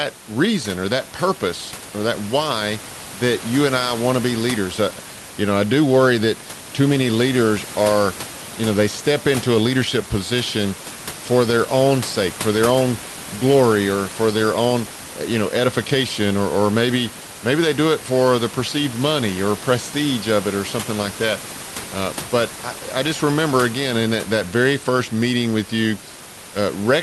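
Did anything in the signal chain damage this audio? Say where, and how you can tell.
No, nothing in the signal chain stood out as damaging this audio on listening.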